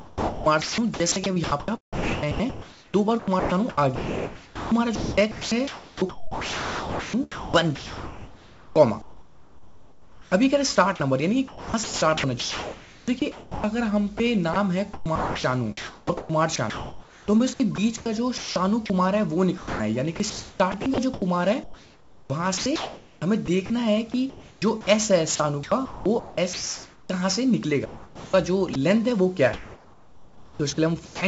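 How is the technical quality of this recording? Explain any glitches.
The recording is choppy throughout, most likely because a voice detector was gating transmission. The audio is band-limited to nothing above 8 kHz, consistent with a G.722 call path.

Sound chopped by the voice detector occurs at 0.0–13.64 s, 14.18–18.90 s, 19.58–23.70 s, 24.30–27.09 s, 27.85–28.75 s and 29.53–31.21 s. The sender repeatedly stopped transmitting whenever the detector judged the signal inactive, and the receiver filled those gaps with synthetic comfort noise of the kind RFC 3389 describes. The replaced portions total about 8.7 s in the first stretch and 0.5–2.0 s in each later one. As a result, quiet passages and edges of sound drop out.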